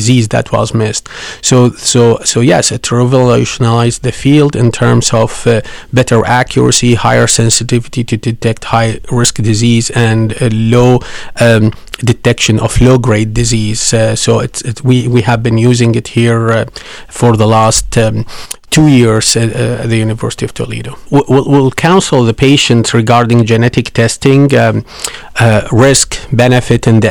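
Harsh, buzzy crackle rides on the louder syllables of this speech recording from start to finish, the mark of hard clipping. The signal is driven about 13 dB past what the stage can pass, so a few percent of samples are sheared flat, spraying high harmonics.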